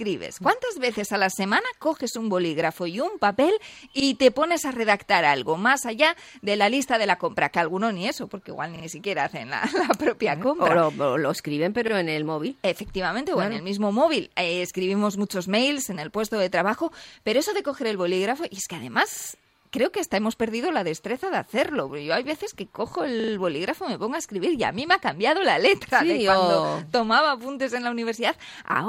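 At 8.76 s, 11.88 s, 19.12 s and 23.2 s a repeated buffer occurs. The output ran short of fresh audio and replayed its most recent block, which fits a 40 ms buffer. Each event is a stutter with hard joins. The block sounds three times at 8.76–8.84 s, twice at 11.88–11.92 s, five times at 19.12–19.28 s and four times at 23.2–23.32 s. The sound then resumes with essentially nothing skipped.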